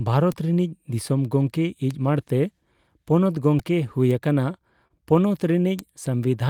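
At 0.32 s the speech carries a bit error spike: a single flipped bit in one sample throws its value out by a power of two and straight back. It sounds like one sharp tick with no relation to the speech. On a waveform it is a lone vertical needle; on a spectrogram it is a thin full-height line. The same fault recurs at 1.91 s, spread over three consecutive samples, just before "ᱢᱟᱬᱛᱮ ᱯᱚᱱᱚᱛ". It returns at 4.11 s as one sample and at 5.79 s as two. Each one is an isolated click.

At 3.59 s, right after "ᱢᱟᱬᱛᱮ ᱯᱚᱱᱚᱛ", comes a repeated buffer. Fresh audio was late, so the output replayed its last block four extra times. Each block lasts 1.33 ms, which fits a 64-sample buffer. Because the buffer is so small, the repeats fuse into a brief buzzy click rather than an audible stutter, and about 5 ms of speech goes missing. On a waveform you would see a tiny periodic stretch with hard joins; on a spectrogram, a short vertical smear with faint harmonic striping at roughly 750 Hz.

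From 4.87 to 4.92 s there is a short stall from a late packet. The jitter buffer ran dry, and the receiver held the last sound for 27 ms until the packet turned up. It then resumed exactly where it had stopped, so nothing is lost, but the sound is drawn out with a slight buzz. That delay is permanently added to the stream. A spectrogram shows flat, frozen horizontal bands for that span, and the waveform shows a repeated cycle.

From 6.10 s to the end comes a jitter buffer slow-down. To rebuild its reserve, the receiver repeated single pitch periods over and over, adding 38 ms. The tail therefore plays at about 92% speed with the pitch unchanged, so it sounds slightly drawn out. On a spectrogram the harmonics hold their spacing while syllables stretch wider. The waveform shows runs of near-identical cycles.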